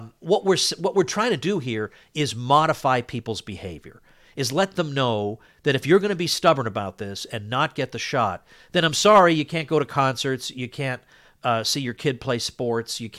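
Hard clipping at 6.48 s, after "you're going to be", and again from 9.06 to 9.23 s, after "the shot then I'm": peaks overdrive by about 2 dB and about 4 dB, get sliced flat, and crackle.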